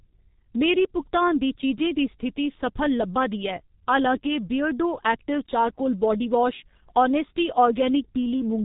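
Speech passed through the G.723.1 codec throughout, at a heavily compressed rate that suggests roughly 6 kbit/s. Nothing survives above 3.8 kHz, leaving the sound muffled and hoarse, with smeared consonants.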